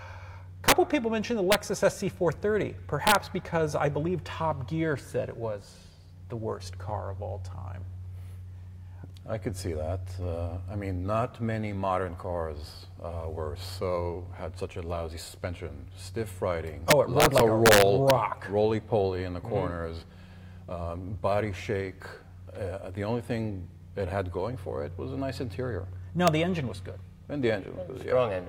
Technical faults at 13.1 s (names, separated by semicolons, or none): none